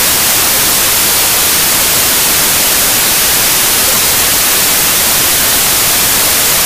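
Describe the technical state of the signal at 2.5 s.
Packed 24-bit samples are being read as 32-bit, a wrong sample width fault running through the whole clip, so at 2.5 s mismatched bytes produce loud noise burying the original, 1.33 times too fast and high.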